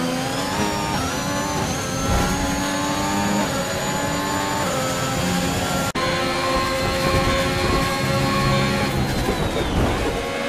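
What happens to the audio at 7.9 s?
Nothing goes wrong at 7.9 s; the audio plays through that moment intact, with no dropout, click, glitch or other fault.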